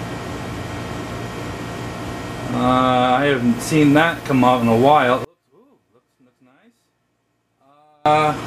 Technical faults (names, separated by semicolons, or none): one channel inverted